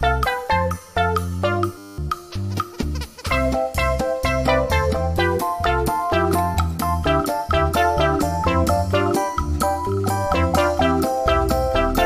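A system hang loop runs from 1.78 to 1.98 s: a 10 ms buffer repeats, giving a steady 100 Hz buzz and losing about a fifth of a second of audio.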